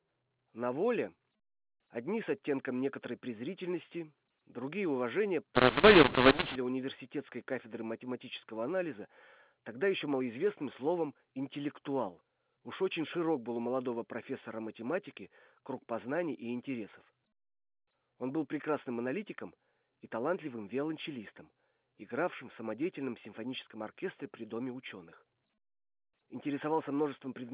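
From 5.55 to 6.55 s, between "некоторой презрительности другие уважения" and "университетской кафедры математического анализа", a mu-law and A-law mix-up decodes A-law telephone samples as mu-law. Levels scramble into harsh distortion, with jagged, uneven waveform peaks, noise-filled pauses, and broadband hash smeared across the spectrogram below 4 kHz.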